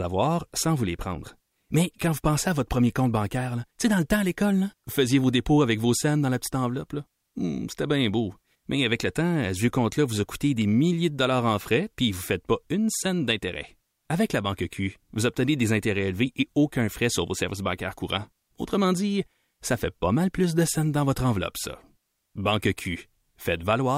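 Speech recording with no technical fault audible anywhere in it. Nothing in the signal calls for a time, a value or a cause.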